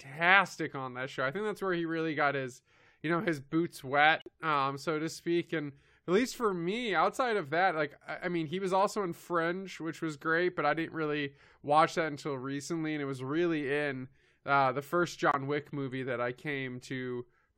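At 4.20 s, just after "you know his boots", the speech drops into silence for about 88 ms, until 4.28 s. This is a corrupt frame muted. Damaged compressed frames were rejected by the decoder, and the player filled their slot with silence. The hole starts abruptly, and the audio resumes on time with "um so to speak". It happens again at 15.31 s, after "in uh the first", with a shorter gap of about 44 ms.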